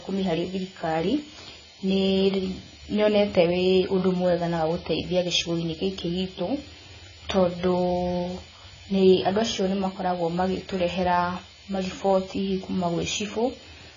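AAC compression damage runs throughout this speech recording, with nothing above 7 kHz, a dull, smeared tone, and warbling, fizzy sibilants. The heavy damage likely comes from AAC-LC coding at a very low rate, around 16 kbps, forcing a lowered cut-off and coarsely quantised, patchy spectral bands.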